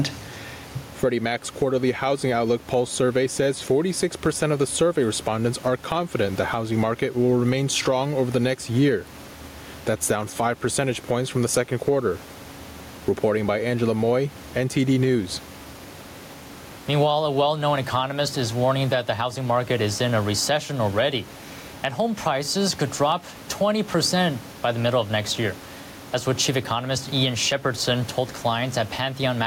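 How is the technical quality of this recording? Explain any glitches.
The recording has gain pumping throughout. The room noise sits about 29 dB below the speech, and the gain swings by around 10 dB. That points to gain set likely far too high with a fast limiter clamping each peak, squashing the speech. Unlike a noise gate, the background never cuts to silence.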